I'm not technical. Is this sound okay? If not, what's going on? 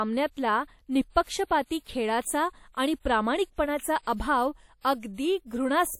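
No. Throughout the whole speech clip there's a plainly audible ringing, washy quality with a soft hiss that swells and fades along with the sound, which points to likely WMA compression damage. Squeezing the file smaller smears small errors over short stretches of time, so they trail around the sound. Unlike steady background hiss, which stays constant during pauses, this noise rises and falls with the sound and disappears when it goes quiet.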